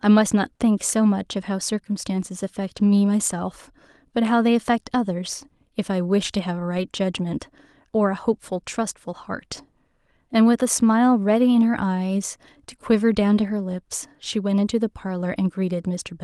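Speech carried over a call link whose Opus coding noise and high-frequency ceiling around 12 kHz are audible. Short concealed packet loss at 0.53 to 0.61 s: two consecutive 20 ms packets were missing and the receiver extrapolated the preceding sound, giving a brief smear rather than a gap. Lost packets rebuilt from error correction at 2.19, 6.77, 9.57 and 11.73 s: each 20 ms frame was decoded from a low-bitrate backup copy, so the original content is still there but sounds briefly rougher and noisier instead of smeared.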